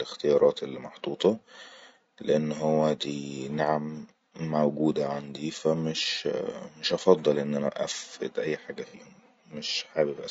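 A speech clip with plainly audible low-delay AAC compression throughout: a rough, grainy texture and noise between harmonics, likely from AAC-ELD's short frames at around 32 kbps, unlike smooth broadband hiss. AAC frame loss with concealment appears from 8.87 to 8.95 s, just after "اني أفئد اي حاجه": a brief smeared, noisy patch, which fits about two lost frames, rather than a clean dropout to silence.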